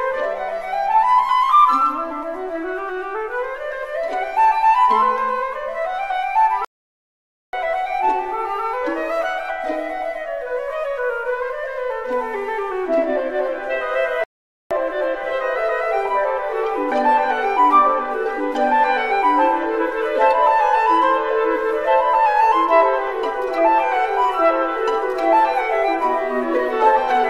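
The audio has two playback stalls, at 6.65–7.53 s (0.88 s) and 14.24–14.71 s (0.47 s), where output drops to silence mid-flow, likely from a starved or blocked player.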